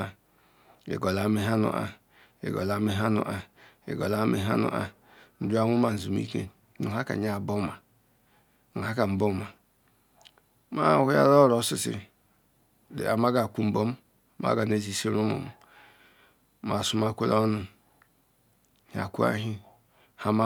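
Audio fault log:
No faults found in the speech audio.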